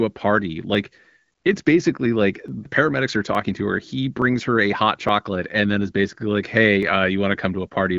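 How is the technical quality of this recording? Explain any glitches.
A regular ticking glitch runs through the speech, sitting over wideband phone-style audio that tops out around 7.5 kHz, consistent with AMR-WB at about 12.65 kbit/s. From 0.75 s to 7.69 s there's a click roughly every 0.87 s, about ten in all. These are likely clock drift buffer slips: two clocks disagreeing by several hundred ppm, so a few dozen samples get dropped or repeated each time.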